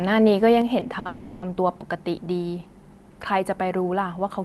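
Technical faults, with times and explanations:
0.62 s to end, sudden gain jump: the level of the speech and the background noise drops by about 5 dB from one sample to the next, likely a gain setting applied without a ramp. The waveform envelope steps down at once, and the spectrogram darkens evenly across all frequencies.
0.79 to 0.83 s and 0.99 to 1.07 s, short stall from a late packet: the jitter buffer ran dry and the receiver stretched the last sound by 20 ms, then by 60 ms, before resuming where it left off. Each appears as a brief held, slightly buzzy stretch with smeared, repeating harmonics on the spectrogram.
1.07 to 1.44 s, call audio freeze: directly after the second stall, the sound is held for another 350 ms, likely because packets were delayed in transit. It never reaches silence but fades to a buzzy hiss. The spectrogram shows flat, blurred horizontal bands that then snap back to normal speech.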